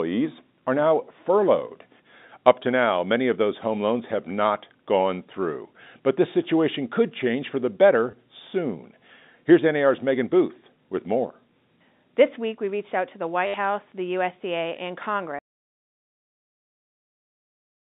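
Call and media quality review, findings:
Packet loss with last packet repeated: receiver replaying the previous packet at 8.11–8.13 s (20 ms) and 13.47–13.54 s (70 ms). Robotic stutter, buzz rate fitting 10 ms packets.

Audio dropout to silence: input likely lost from 15.39 s to the end, with silence written. Sound cuts to dead silence with no room tone; G.711 band-limited telephone sound precedes it.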